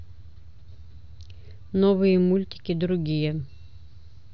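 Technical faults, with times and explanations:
No technical faults can be heard anywhere in this speech clip. There is nothing to list by time or range.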